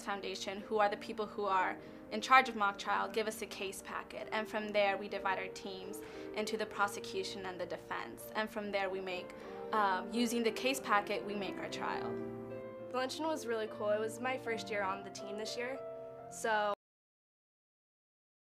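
At 16.74 s the sound stops abruptly. This is a cut-off end. The audio breaks off in the middle of a sound rather than fading or finishing naturally. There is no decay and no tail. What remains is silence for the last 1.8 s of the clip. The final stretch of audio was never written or played out. The buffers holding that material were lost at the end of the recording, so the signal simply halts.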